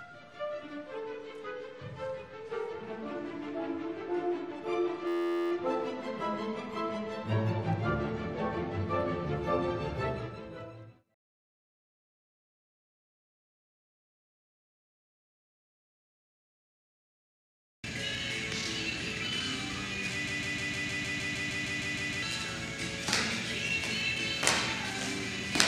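At 5.07 s the sound collapses into a flat, steady buzz lasting until 5.52 s, pitched at about 86 Hz. This is a system hang loop. The computer or driver froze while the sound hardware kept replaying the same tiny stretch of its ring buffer: an 11.6 ms slice repeated 38 times back to back, which fits a 512-sample buffer. The slice is short enough to fuse into a tone rather than a stutter, and almost no audio goes missing around it.

From 20.27 s to 22.22 s a single fragment of about 154 ms plays 13 times in a row, with identical, evenly spaced repeats that give a choppy skipping effect. This is a broken-record loop. The likely cause is that the player, encoder or stream stalled and kept resending the last fragment it held. Whatever should have played during those two seconds is lost, and the audio resumes after the gap.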